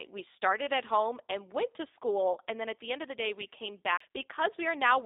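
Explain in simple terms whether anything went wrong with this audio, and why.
Throughout the clip, the speech has passed through the G.729 codec, a phone-call compressor that rebuilds the voice from a simplified model of the throat and pitch. Everything above 3.7 kHz is gone, so it sounds thin, slightly rough and synthetic.

From 3.97 to 4.00 s there is a CD skip. The disc player briefly lost its place on the spiral track, went silent for a split second, and resumed from a different spot. You hear this as a tick and a sudden jump in the sound.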